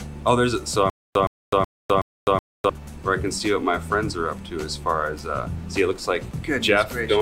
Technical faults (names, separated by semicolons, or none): stutter with silent gaps